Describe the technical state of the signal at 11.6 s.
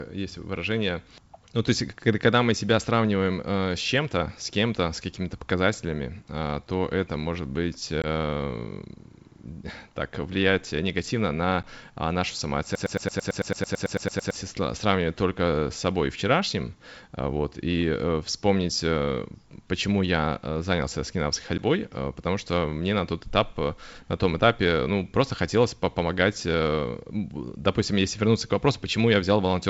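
Packet loss on an ADPCM call at 11.63 s: a single lost packet leaves a hard-edged 10 ms silent hole, and the decoder's predictor and step size desynchronise, so the sound resumes distorted before settling.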